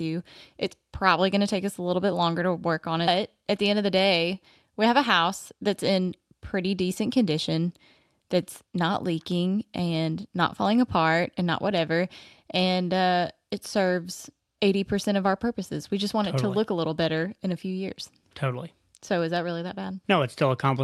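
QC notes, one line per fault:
3.07–3.09 s, skip ahead: after "longer to work on", roughly 0.4 s of speech is gone and the two sides butt together, an abrupt waveform discontinuity with no silent gap.
5.17–6.00 s, jitter buffer speed-up: between "day we have a" and "pretty decent condition that's", speech runs at 106% speed with unchanged pitch. About 70 ms of pitch periods are trimmed, compressing the spectrogram horizontally.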